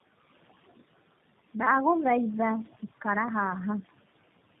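Noise suppressor artifacts run through the whole clip. The suppressor pulls down bands it judges to be steady noise by about 16 dB, so the room noise, sitting about 19 dB below the speech, drops away in pauses and swells under speech.

Tandem speech coding is also present from start to finish. The sound points to two low-rate speech codecs in series, fitting an AMR-NB leg and a G.729A leg joined through G.711. Each re-encodes the previous one's damage, giving rough, warbly, muffled speech with nothing above 3.7 kHz.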